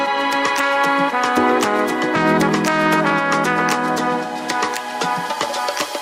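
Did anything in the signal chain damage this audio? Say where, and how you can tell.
No, nothing in the chain audibly damaged it.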